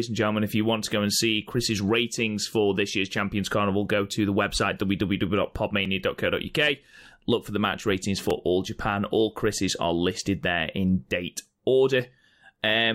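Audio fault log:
5.85 s and 8.30 s (right after "for the match ratings"), block of digital silence: a 2.9 ms hard cut to zero, likely a missed 128-sample buffer, so each one is heard as a tick or dip.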